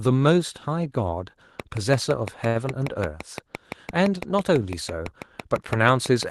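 Speech carried over a WebRTC call path with Opus coding, which limits the audio bandwidth to about 12 kHz. A train of clicks runs from 1.60 s to the end: regular, similar pulses at about 5.9 per second, roughly 10 dB above the speech and audible in pauses, likely from electrical interference or a faulty connection. At 2.47–2.57 s there is a short stall from a late packet. The jitter buffer ran dry, so the receiver stretched the preceding sound for 78 ms and then resumed where it left off. Nothing is lost, but that moment is held audibly too long.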